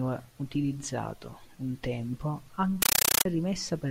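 Compressed stream played as audio, from 2.82 to 3.25 s: the speech gives way to harsh, very loud chattering static as an undecoded AC-3 stream, which fits 448 kbps Dolby Digital, reaches the output as raw samples. Each encoded frame comes through as a burst of noise about 9.3 ms long followed by silence, repeating 31.25 times a second, so the static has a rapid, rattling pulse.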